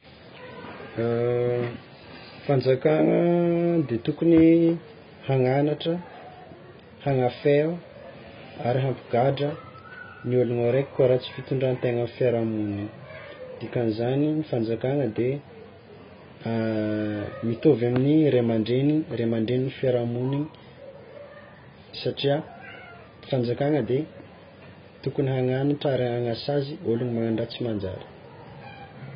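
From start to finish the speech sounds dull and smeared. Nothing is present above 5 kHz, sibilants turn fizzy and vague, and sustained sounds carry a watery warble. This is likely AAC compression at a very low rate. The heavy damage fits a bitrate around 16 kbps, where the encoder pulls its cut-off down and quantises the remaining frequency lines so coarsely that gaps and noisy fill replace real detail.

From 0.99 s to 28.70 s a faint, regular tick recurs about once a second, around thirty in all. It is clearest on louder, sustained passages and disappears in pauses. These are clock slip clicks, likely caused by two devices running on free clocks that differ by roughly 30 parts per million. Each small discontinuity fits a single sample being dropped or repeated whenever that drift adds up to one whole sample.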